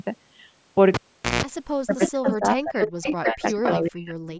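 At 0.94 s there's a pop as the cable is pulled, then near silence for about 0.43 s, broken by a short burst of 60 Hz mains buzz, roughly 160 ms, while only the tip touches, and another pop at 1.43 s when the cable plugged back in brings the sound back.

From 1.84 to 3.63 s the speech gets pushed down in pieces, with drops of around 40 dB at the worst and roughly one and a half seconds affected. It returns from 3.79 to 4.17 s. That's likely speech suppressed in double talk: the echo canceller couldn't tell the talker from the loudspeaker echo, so it ducked both.

Inside that stretch you can hear an echo leak, a copy of the voice delayed by 452 ms and only a few dB quieter than the speech. Short scraps come at 2.02 and 2.27 s, with longer stretches from 2.83 to 3.31 s and from 3.47 to 3.72 s. It's likely a far-end loudspeaker whose residual echo got sent back.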